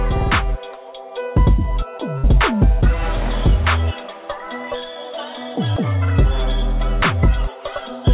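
From 2.18 s to 2.25 s comes a burst of packet loss: the receiver stretched the last sound for 54 ms, fading it down, and then 60 ms of audio is simply gone. Unlike a silent dropout, the gap is filled, and the audio resumes further on.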